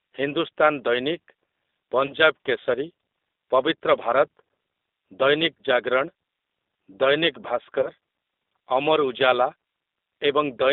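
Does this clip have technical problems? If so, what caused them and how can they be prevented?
Yes. G.729 codec damage runs through all the speech: the band is held to roughly 250 Hz to 3.7 kHz, and the voice sounds rough and synthetic, which fits an 8 kbit/s coder rebuilding each frame from a filter and a few pulses. A wider-band, higher-bitrate codec such as G.722 or Opus prevents this.

VoIP packet loss concealed by the speech codec appears at 2.06–2.13 s and 7.81–7.91 s. Each gap fits one lost 30 ms packet, and the decoder stretches the previous sound into a fading buzzy tone or coloured noise that stays weak briefly afterwards. A jitter buffer, forward error correction and a less congested network path reduce these losses.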